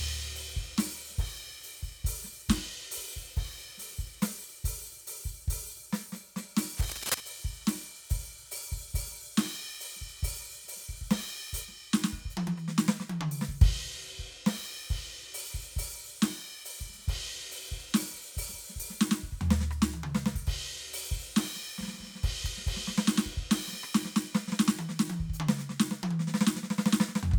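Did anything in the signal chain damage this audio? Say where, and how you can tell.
Yes. Cable scratch noise from the analogue wiring stage runs from 6.73 to 7.21 s: dense, irregular crackling sits only a little below the music. This is likely a worn cable or connector being moved, its contact resistance fluctuating rapidly and injecting noise bursts.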